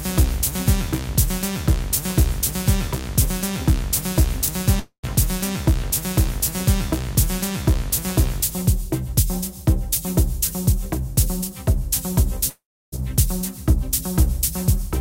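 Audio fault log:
4.46–4.48 s, chunks out of order: a 5.8 ms chunk of sound plays three chunks later than it should. No audio is missing, but the order is scrambled and there are three hard joins where unrelated pieces butt together, so this brief moment sounds jumbled. Unlike a dropout, there is no fill, no fade and no silence, and the sound continues without any part being lost.
4.79–5.05 s and 12.49–12.94 s, long network dropout: two gaps in which the sound stops and is replaced by a buzz or hiss that continues the last sound and fades. About 240 ms is lost in the first gap, which ends in about 90 ms of silence. About 440 ms is lost in the second, which ends in about 320 ms of silence. The likely cause is audio that never arrived, and the sound resumes further on without the missing part.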